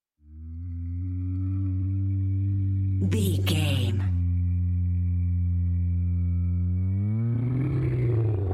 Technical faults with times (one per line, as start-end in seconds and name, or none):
none